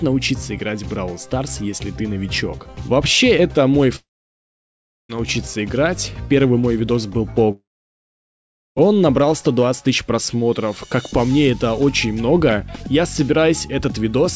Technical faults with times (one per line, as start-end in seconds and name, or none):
3.96-5.11 long network dropout
7.51-8.78 long network dropout